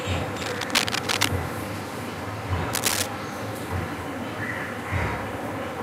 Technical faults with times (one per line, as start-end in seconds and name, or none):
0.36-1.28 cable scratch noise
2.73-3.06 cable scratch noise